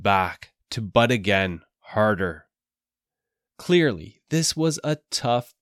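A short stretch of speech, and there's nothing technically wrong to point to anywhere in it.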